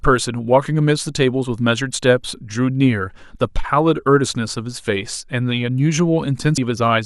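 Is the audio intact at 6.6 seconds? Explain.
No. At about 6.58 s the speech is hit by damaged data in a compressed stream, a blip lasting only a few milliseconds. Corrupted bytes leave the decoder unable to read the frame correctly, so it loses sync and outputs garbage until it finds the next valid frame header. The result is a brief chirp, squawk, click or short hole. On a spectrogram it shows as a thin vertical smear of broadband energy; the waveform shows a sharp, jagged discontinuity.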